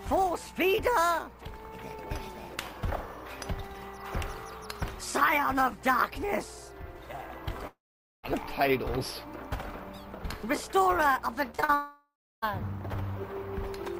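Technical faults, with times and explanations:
7.67 to 8.25 s, long network dropout. The sound breaks off and for about 0.56 s nothing new arrives. The receiver carries the last sound forward as a fading buzz, and then roughly half a second of near silence remains. When the audio returns, the missing stretch is simply gone. The cause is likely a network outage, since the fill and silence are what a receiver does when packets stop arriving.
11.51 to 11.70 s, repeated packet loss (robotic sound). Four short holes fall within about 0.19 s, the longest 42 ms. Each is patched by stretching the preceding sound, so over half of this span is filled in. The holes come in quick succession. That gives a choppy texture with small pieces missing.
11.74 to 12.44 s, long network dropout. Right after the choppy patch, the audio cuts out again for about 0.68 s. The last sound is extended as a fading hiss, then it gives way to near silence lasting under a third of a second. 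Playback resumes without the lost portion. As before, a stall in packet delivery is the likely cause.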